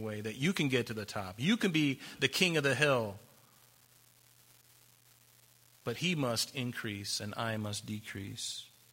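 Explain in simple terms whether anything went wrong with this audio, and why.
Something did go wrong. A steady crackle, like faint fizzing, runs through the whole recording, from start to finish. It stays the same under the speech and in the pauses. That points to an unreliable data bit. One of the wires carrying the digital sound is not working reliably. At random moments it flips one bit of the signal. Each flip adds a tiny click of the same small size. These clicks blend into that constant hiss.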